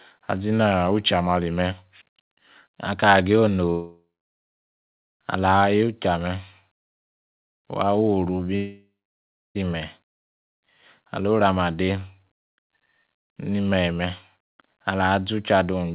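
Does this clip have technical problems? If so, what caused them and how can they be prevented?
Yes, there are two long network dropouts, at 3.7 to 5.10 s and at 8.56 to 9.57 s. Each time, the last sound smears into a fading buzz and then goes quiet, for about a second the first time and about 0.7 s the second. The speech then resumes with roughly 1.4 s and 1.0 s missing. The likely cause is packets not arriving, so the receiver's concealment runs out. A steadier connection, or forward error correction on the call, would prevent it.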